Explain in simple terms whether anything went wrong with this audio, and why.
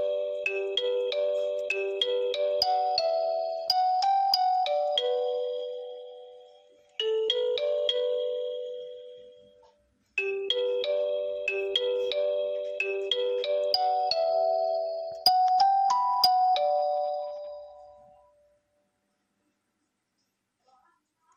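From start to finish the sound is dull and carries a gurgling, grainy distortion, pointing to MP2 compression as the likely cause. Starved of data, the format shuts off whole upper bands that flicker on and off, unlike a simple filter's steady muffling.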